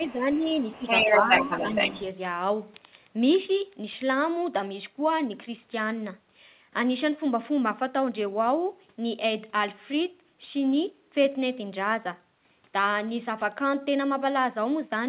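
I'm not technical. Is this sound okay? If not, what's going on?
No. At 0.0 to 0.5 s, 0.74 to 0.85 s and 1.23 to 1.49 s the voice briefly dips or thins. This is speech suppressed in double talk, likely because both sides spoke together.

A second voice also comes through, which is the other side's voice leaking through, likely from the loudspeaker. It is faint at 0.07 to 0.13 s, as loud as the talker from 0.58 to 2.03 s, and barely there at 2.52 s.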